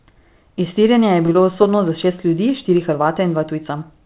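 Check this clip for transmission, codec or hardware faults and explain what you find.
Two transmission faults show up close together in this speech, both on a call path that sounds like G.711 mu-law with everything above 4 kHz cut off.

From 1.26 to 1.30 s there is a short stall from a late packet. A packet arrived behind schedule, the jitter buffer ran dry, and the receiver held the last sound for about 24 ms until the data turned up, then carried on from the same point. Nothing is lost, but the sound lingers unnaturally with a slight buzz or dip, and everything after it sits about 24 ms later.

From 1.32 to 1.37 s there is a short concealed packet loss. About 20 ms of audio never reached the decoder in time, so the receiver synthesised roughly 21 ms to bridge the gap by extending the preceding sound and then crossfading back into real audio. Coming straight after the stall, it is heard as a brief smear or wobble, and a quick consonant there can go missing.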